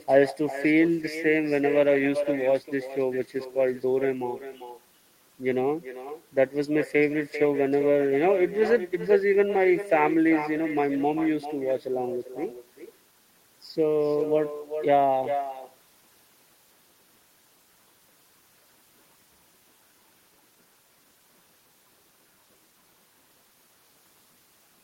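Speech with echo and no canceller throughout: each phrase returns about 11 dB quieter and thinner, roughly 0.4 s later, from the far end's loudspeaker feeding back into its microphone.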